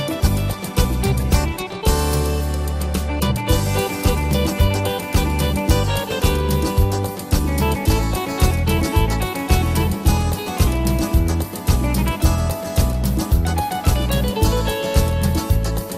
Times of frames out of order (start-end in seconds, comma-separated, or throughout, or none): none